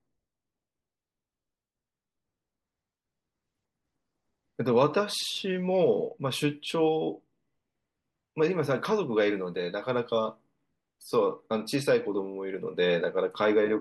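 A recording of speech with no technical faults to report. Nothing in the signal points to a problem in how it was captured, processed or delivered.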